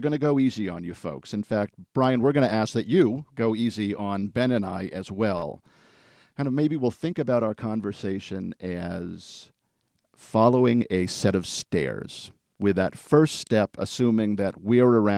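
Just after "and I as", from 5.37 to 5.44 s, there is a short stall from a late packet. A packet arrived too late, the jitter buffer ran dry, and the receiver stretched the last sound by about 47 ms until the audio could continue from where it stopped. Nothing is skipped, which separates this from a dropout or concealed loss: the syllable simply hangs a moment too long with a slight buzz or dip, and everything after it is pushed back by the same 47 ms.

From 10.67 to 11.29 s, leading into "of stairs", a jitter buffer speed-up sets in. Too much audio had built up in the buffer, so the receiver cut the backlog by repeatedly removing pitch-period-sized slices, roughly 50 ms in total. Speech runs at about 108% speed and sounds hurried, yet the pitch stays where it was. That unchanged pitch is what tells it apart from a resampling or clock-drift error, which would raise the pitch along with the pace.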